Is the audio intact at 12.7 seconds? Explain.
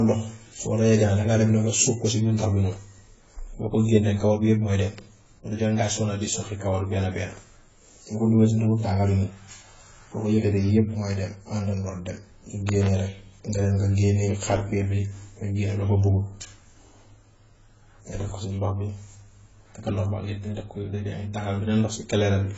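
No. From 12.69 to 12.88 s a loud pop, a sharp double pop about 15 dB above the speech, cuts through; it is likely a voltage glitch, such as a plug or switch transient. Throughout, the speech is dull and smeared with nothing above 7.7 kHz, likely from heavy AAC compression, which fits a low bitrate around 16 kbps.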